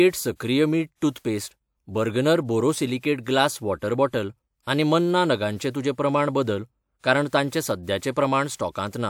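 Speech with pre-echo at 1.11 to 1.16 s and 8.56 to 8.59 s: a short hiss runs about 50 ms and 34 ms ahead of each sharp onset, softening it. The transform codec has spread its quantisation noise across the block, including the quiet moment before the attack.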